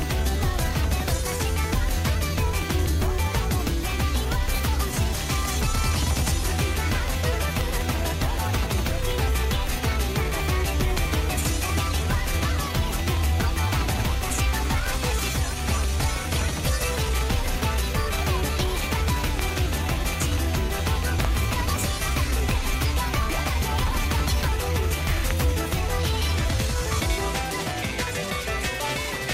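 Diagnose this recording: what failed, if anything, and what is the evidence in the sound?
A voltage step entering the analogue wiring, likely from a plug, switch or static, produced a loud pop at 7.61, 10.98, 19.39, 22.51 and 25.31 s, plus a double pop at 21.20 to 21.27 s. Each stands about 10 to 15 dB above the continuing sound.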